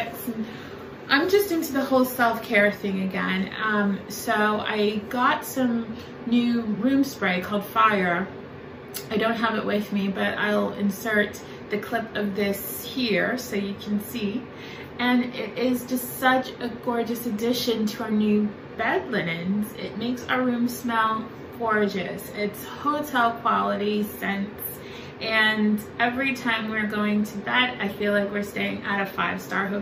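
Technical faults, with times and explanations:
No technical faults are heard, so there are no times or explanations to give.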